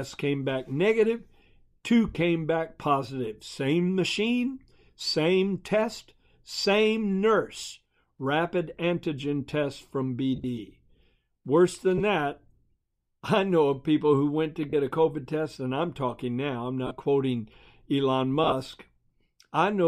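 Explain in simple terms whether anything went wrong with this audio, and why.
Six short bursts of lost LE Audio frames: the Bluetooth link dropped bits of sound and the LC3 decoder papered over each gap with a brief noisy smear. Listen at 2.13 s, just before "back positive"; 10.36 to 10.44 s, after "antigen test from"; 11.98 to 12.01 s; 14.70 to 14.73 s, after "people who went to"; 16.87 to 16.91 s; and 18.44 to 18.52 s.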